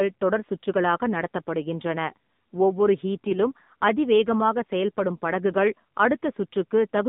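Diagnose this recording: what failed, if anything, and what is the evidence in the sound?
The failure is at the codec stage: the speech has passed through an AMR narrowband mobile codec for its whole length. The band runs only from about 150 Hz to 3.7 kHz, with nothing above 4 kHz, and the voice has a plainly buzzy, synthetic texture. That points to a low AMR-NB mode, around 7.4 kbps, where too few pulses per subframe drive the vocal-tract model. A plain telephone-band filter would narrow the sound without this synthetic buzz.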